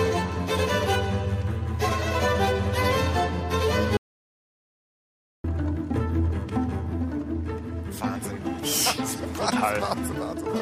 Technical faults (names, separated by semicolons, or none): audio dropout to silence